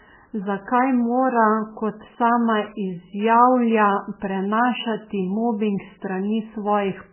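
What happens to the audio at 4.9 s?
At 4.9 s the speech carries the heavy damage present throughout, likely from MP3 compression. Nothing sounds above 3.1 kHz. Starved bits leave it watery and swirly, which fits a very low bitrate.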